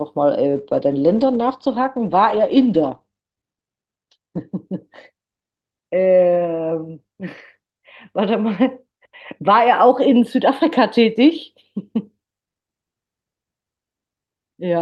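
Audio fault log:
0.5–11.57 s call bitrate drop: coarser coding and a cut-off falling to 8 kHz, consistent with roughly 12 kbps at its lowest; the spectrogram goes dark above.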